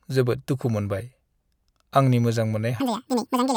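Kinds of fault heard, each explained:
Section at the wrong speed: from 2.8 s to the end, right after "आंनि मोजां", the speech suddenly runs at double speed and jumps roughly ten semitones higher, sounding squeaky and rushed. This is likely from playback against the wrong clock, which shifts speed and pitch together.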